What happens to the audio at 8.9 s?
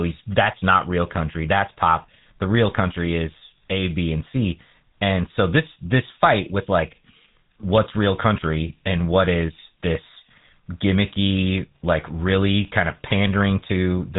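At 8.9 s the speech is buzzy and gravelly, with a rough, grainy edge and no brightness above about 3.9 kHz. This is not a momentary event but part of GSM full-rate codec damage that runs through the whole clip. The coder models the vocal tract as a filter and excites it with a sparse, regularly spaced pulse train rather than the true signal, discarding most of the excitation detail. That coarse rebuild produces the buzz. The damage is plainly audible and fits a 13 kbps coder.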